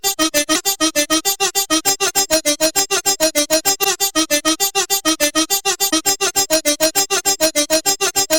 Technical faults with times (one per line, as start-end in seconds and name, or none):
0.00-8.38 integer overflow
0.52-0.56 damaged data in a compressed stream
3.81-3.85 damaged data in a compressed stream
5.89-5.93 damaged data in a compressed stream